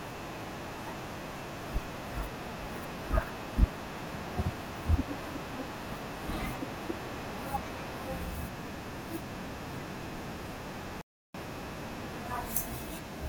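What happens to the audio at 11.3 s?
An audio dropout to silence runs from 11.01 to 11.34 s, about 0.33 s, most likely because the input signal was lost while the recorder kept writing zeros. The speech stops abruptly mid-flow, leaving dead silence with no room tone, then resumes.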